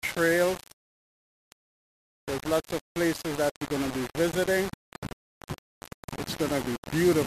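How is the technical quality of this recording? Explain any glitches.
The technical quality is poor. Throughout, the audio has a heavy, grainy distortion that tracks the sound, with noise only about 10 dB below it. This is likely low bit depth without dither: rounding to roughly 4 bits makes the error follow the signal, so quiet passages turn gritty or sputter.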